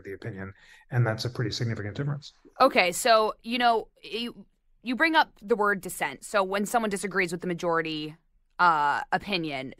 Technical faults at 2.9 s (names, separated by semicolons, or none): clock slip clicks